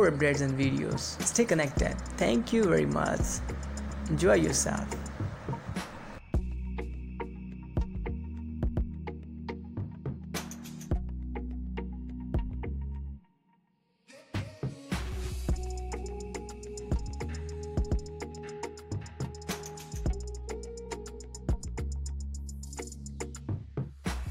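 A repeated buffer occurs at 3.91 s. New audio failed to reach the output in time, so the device replayed the block it had just played. The repeated piece is only about 2.9 ms long, which fits a 128-sample buffer, and it sounds twice in a row with a hard join between the copies. At this size the repeat is too brief to register as a stutter, so it comes across as a single sharp click, and a few milliseconds of the real audio are skipped.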